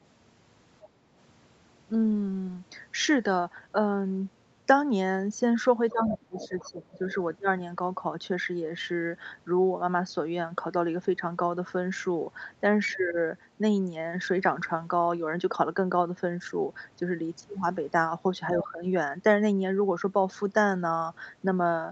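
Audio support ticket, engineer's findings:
Other side's voice leaking through at 0.82–0.88, 5.89–7.14, 12.89–13.18 and 18.63–18.67 s. Far-end residue faint to moderately loud, worst around 6–7 s; likely incomplete echo cancellation of loudspeaker playback.

Background gated by the echo canceller, 0.90–1.09 s. Room tone dips about 6 dB for roughly 150 ms as suppression clamps the mic during far-end playback, then recovers.

Speech suppressed in double talk at 5.92–7.08, 12.98–13.16 and 18.61–18.83 s. Near-end speech ducked roughly 20 dB for about a second, then roughly 10 dB in the shorter events, while far end overlaps. Canceller likely attenuating both talkers together.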